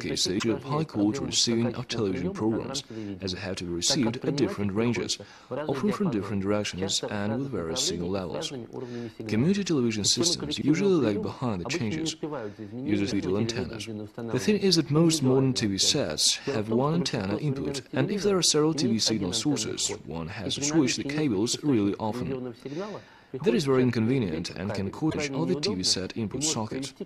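Damaged data in a compressed stream corrupts frames, so the decoder misreads them and loses sync while hunting for the next header. Each time this produces a brief chirp or blip: 0.35–0.44 s, 13.08–13.13 s, and 25.07–25.15 s.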